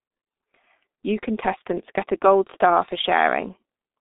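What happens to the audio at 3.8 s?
At 3.8 s the G.723.1 codec is still at work, as it is across the whole clip. It encodes speech in coarse 30 ms frames with a slowly updated voice model, fitting roughly 6 kbit/s. Nothing above 3.7 kHz survives, so speech sounds muffled and hoarse, with smeared consonants.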